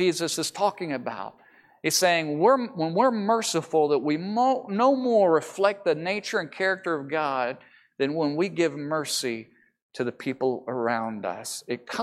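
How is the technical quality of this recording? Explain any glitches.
Nothing here needs explaining, since the speech comes across without any glitches worth pointing out.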